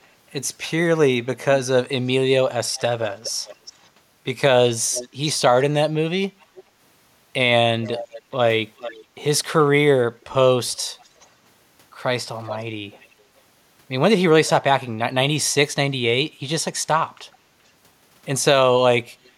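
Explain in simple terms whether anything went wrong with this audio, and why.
Echo leak appears at 2.68–3.88, 4.91–5.09, 6.40–6.63, 7.83–9.05, 10.70–11.27, 12.43–13.23, 17.32–17.37 and 19.25–19.30 s: a faint copy of the speech returns about 0.43 s late. Likely, a loudspeaker's sound reached a microphone and its echo canceller didn't fully remove it.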